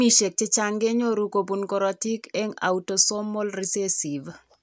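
No technical faults can be heard anywhere in the recording.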